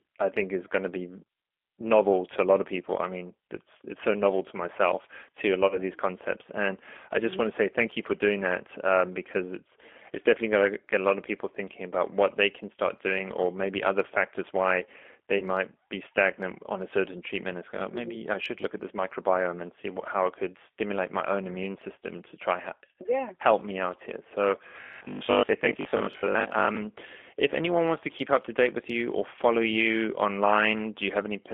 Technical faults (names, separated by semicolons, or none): G.729 codec; VoIP packet loss concealed by the speech codec; robotic sound from repeated short buffers